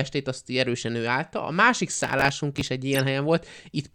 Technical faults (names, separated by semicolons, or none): processor overload crackle; corrupt frame decoded